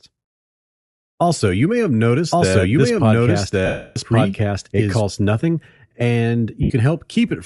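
Across the whole speech clip the sound has a breathy, grainy edge. The top of the spectrum sounds hollow and filled with hiss rather than real detail. This is Bluetooth LC3 compression, likely. The transform codec throws away much of the upper band and patches it with noise. The damage is plainly audible, which points to a modest rate near 48 kbps with 10 ms frames.

From 2.31 s to 5.01 s a doubled audio track sits under the speech. A second full-band copy runs about a second behind, at roughly the same loudness. It has no reverb tail or room colour. It simply starts and stops abruptly at those edges. An edit holding two copies out of step, or a second slower capture path, could produce this.

From 3.66 s to 3.97 s, about 300 ms, lost LE Audio frames break the sound. The decoder keeps replaying the last spectrum with scrambled phases. Any tonal part smears into noise, then the smear fades toward silence as the gap runs on. 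A shorter dropout of the same kind hits at 6.63 s to 6.70 s, about 70 ms.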